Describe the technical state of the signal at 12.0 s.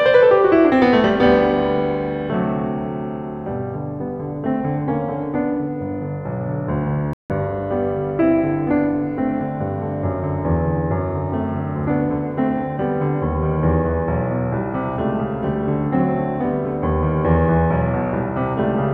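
Around 12.0 s the music plays through intact, with no dropout, distortion or other fault in the signal at that point.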